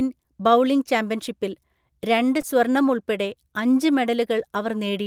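A brief smear at 2.41 to 2.45 s, just before "സ്വർണം ഉൾപ്പെടെ അഞ്ച്", is short concealed packet loss: about 20 ms of the speech arrived too late to decode, and the receiver covered roughly 16 ms of it by extending the preceding sound before blending back into the real audio.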